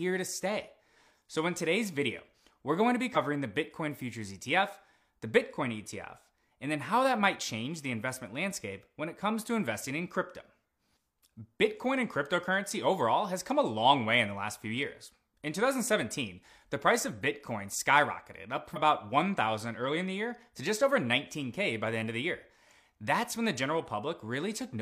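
Compressed frames are skipped at 3.12 to 3.17 s and 18.72 to 18.78 s: the audio jumps ahead by roughly 50 ms and then roughly 100 ms, as whole frames go unplayed.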